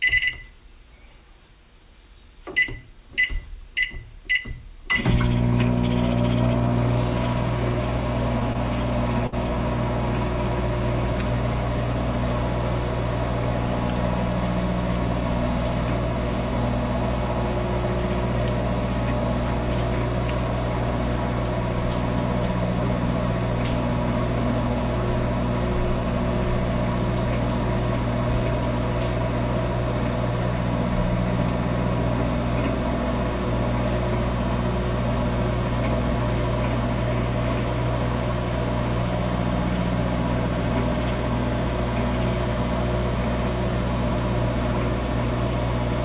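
At 8.53 to 8.57 s and again at 9.27 to 9.34 s, a short stall from a late packet holds the sound for about 17 ms and then 57 ms while the jitter buffer waits. The spectrogram shows a smeared, flat-striped stretch, and the waveform shows repeated cycles, all below the G.711 path's 4 kHz ceiling.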